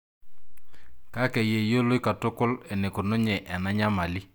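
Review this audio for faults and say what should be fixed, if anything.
No faults; nothing to fix.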